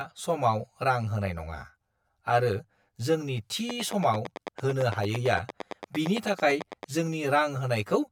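Throughout the speech, channel delay (comb filtering) gives a hollow, phasey colour. One channel runs about 10 ms behind the other, so the mono sum cancels at fixed notches near 50 Hz and every 100 Hz above. Unlike room reverberation, there is no decaying tail.

From 3.70 s to 6.84 s, a train of clicks ticks across the speech and the pauses, about 30 similar pops at a steady 8.9 per second, peaking about 10 dB above the signal. That regular, similar shape, unlike random vinyl-style crackle, points to likely interference or a faulty connection or power supply.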